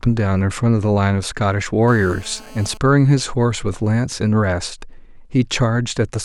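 From 1.88 s to 2.77 s a GSM phone buzz sits under the speech: a nearby 2G handset in a call is transmitting bursts at 217 Hz, which the audio circuitry rectifies into a hard, raspy buzz rich in harmonics, about 25 dB below the speech.

From 2.77 s to 4.94 s it becomes GSM signalling bursts: with the phone's user silent in the call, only short groups of radio bursts are sent, so the rectified interference turns into even ticks with a longer 217 Hz buzz twice a second, roughly 40 dB down.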